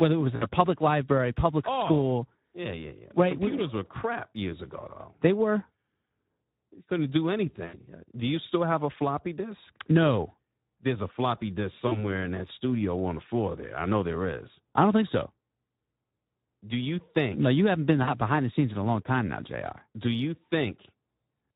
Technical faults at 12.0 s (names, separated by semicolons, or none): Speex codec; VoIP packet loss concealed by the speech codec